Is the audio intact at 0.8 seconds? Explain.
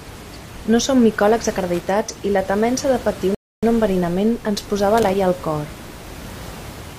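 Yes, the speech at 0.8 seconds is intact, with only the room's own background noise sitting about 17 dB below it.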